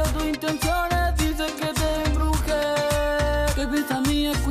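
No technical fault can be heard anywhere in this audio. With nothing wrong to point to, there are no times or causes to give.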